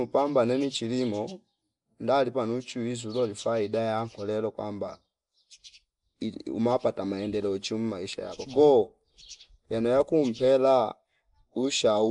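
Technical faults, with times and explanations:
Throughout, Nellymoser compression: the speech carries a rough, hissy halo and a smeared, underwater quality, and nothing reaches above 10.6 kHz. This is likely the Nellymoser Asao codec from Flash, which codes short blocks of samples with a fixed, small bit budget; quieter bands get no bits and are filled with noise, producing the grainy fizz. The damage is plainly audible, which fits a bitrate of around 44 kbps.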